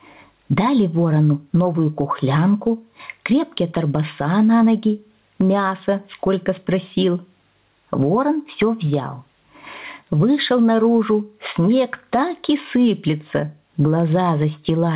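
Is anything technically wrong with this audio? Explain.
Yes. Gain pumping runs throughout: the gain swings by roughly 15 dB, likely from excessive input gain driving a fast limiter.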